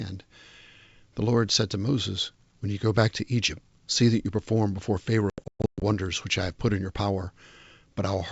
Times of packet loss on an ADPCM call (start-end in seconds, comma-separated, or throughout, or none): 5.30-5.83